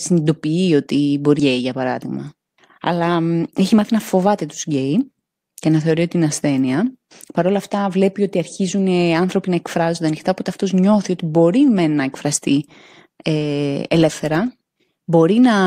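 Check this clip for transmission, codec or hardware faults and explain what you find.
One fault stands out: a jitter buffer speed-up from 3.27 to 5.29 s. After a backlog of delayed audio built up, the receiver repeatedly cut out short pitch-period slices, about a fifth of a second in total. The speech runs at roughly 109% speed and sounds hurried but keeps its pitch. On a spectrogram the harmonic spacing stays the same while syllables look compressed in time. The waveform shows shortened voiced stretches.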